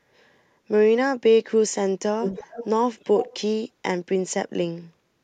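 From 2.22 to 2.68 s and again from 2.99 to 3.37 s, a fainter copy of the speech trails the original by about 0.32 s, sitting roughly 10 dB below it. This is an echo leak, most likely from a far end playing the call on a loudspeaker whose echo canceller let part of the microphone pickup slip through and sent it back, so the speech returns as a delayed, quieter shadow.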